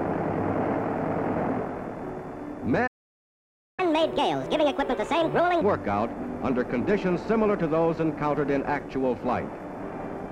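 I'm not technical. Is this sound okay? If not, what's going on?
No, there are two linked problems. First, a playback stall: at 2.87 s the sound cuts out and stays silent for about 0.9 seconds, until 3.80 s. The player most likely ran short of data or got held up for a moment.

Right after, from 3.80 to 5.62 s, comes catch-up at higher speed. The player rushes through the backlog at 1.5 times normal speed to make up the lost time, so everything sounds hurried and pitched up by roughly seven semitones before settling back to normal.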